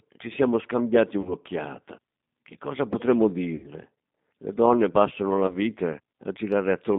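The whole thing runs through a G.729 codec, G.729A at 8 kbit/s by the sound of it, so the line sits roughly between 150 Hz and 3.7 kHz with nothing on top. The encoder rebuilds the speech from a vocal tract filter, a pitch predictor and a handful of pulses per 10 ms frame, and the damage is plainly audible: a rough, slightly synthetic edge on everything.

Then there are three spots of VoIP packet loss concealed by the speech codec. The first is at 1.21 to 1.36 s, right after "ci siamo scambiati", where about 40 ms goes missing, which fits two lost packets. The second and biggest is at 3.56 to 3.69 s after "cosa potremmo", about 80 ms, likely four packets. The last is at 5.47 to 5.56 s following "donne passano la", a single packet's worth of 20 ms. Each time the decoder keeps extending the last pitch and filter it had at falling gain, so you hear a short buzzy or noisy smear that fades. Because every frame builds on the one before, the sound stays a bit weak and off past the gap before it settles back.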